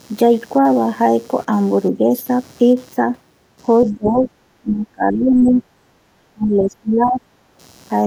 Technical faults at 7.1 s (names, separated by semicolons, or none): computer activity noise; speech suppressed in double talk